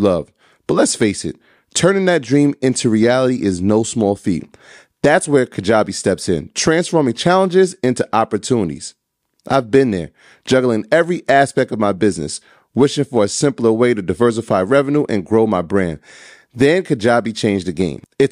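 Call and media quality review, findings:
No audible faults found.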